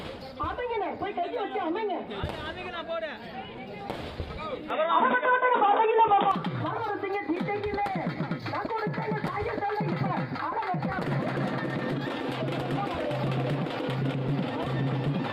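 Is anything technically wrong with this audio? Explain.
Yes. From 4.70 to 6.31 s the input was likely switched to a poorer device, another microphone or a headset's call profile, and then back. That device passes a narrower band, so nothing above 3.8 kHz comes through and the sound turns dull and boxy for that stretch. It also brings its own background noise, roughly 35 dB below the signal, and a level shift of around 5 dB. There is no gap at either switch.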